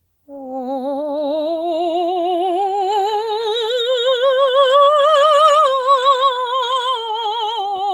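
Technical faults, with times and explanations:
Throughout: channels drifting apart, the left and right running on separate clocks about 100 ppm apart, sliding to roughly a millisecond offset so mono comb notches sweep slowly, unlike steady fixed-delay combing.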